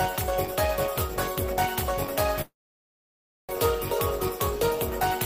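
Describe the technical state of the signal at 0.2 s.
At 0.2 s the signal is intact, with no dropout, distortion, or other fault present.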